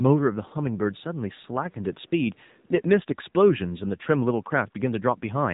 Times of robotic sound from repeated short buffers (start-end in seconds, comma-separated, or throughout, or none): none